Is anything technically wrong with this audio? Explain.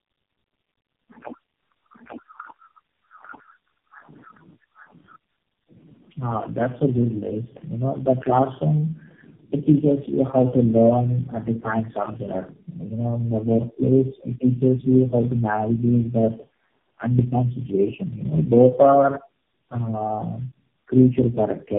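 Yes. Throughout, the speech shows tandem speech coding: it sounds decoded and re-encoded through about four low-rate speech codecs in a row, each compounding the last one's errors. The result is rough, muffled and warbly, with nothing above 3.4 kHz.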